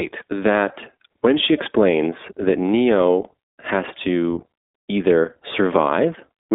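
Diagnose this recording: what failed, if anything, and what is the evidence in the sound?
The failure is at the codec stage: an iLBC codec throughout the speech. Nothing passes above 3.7 kHz, and the band sits at 250 Hz to 3.6 kHz. Each 20 ms frame is coded independently, leaving a plainly audible rough, synthetic texture. This fits the 15.2 kbps mode.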